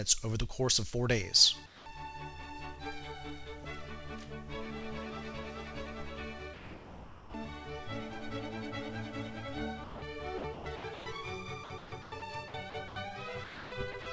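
Sound dropped by the voice detector occurs three times: 1.66 to 1.86 s, 6.54 to 7.34 s, and 9.84 to 10.02 s. Each time the sound gives way to a patch of steady, featureless noise lasting 200 ms, 800 ms and 180 ms respectively, then resumes. The likely cause is the sender's voice detector judging the sound to be background and stopping transmission, with the receiver filling the gap with synthetic comfort noise.

Sound chopped by the voice detector follows in four stretches: 10.38 to 11.06 s, 11.64 to 12.22 s, 12.48 to 12.96 s, and 13.44 to 14.06 s. Within each, the sound cuts in and out repeatedly. About 380, 320, 180 and 340 ms respectively are lost. The likely cause is the detector toggling transmission on and off, with comfort noise inserted in the gaps, all carried over a G.722 call path with nothing above 8 kHz.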